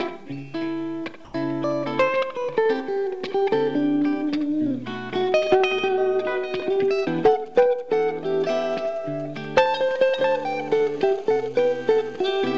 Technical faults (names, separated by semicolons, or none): comfort noise in place of the background; GSM signalling bursts; GSM phone buzz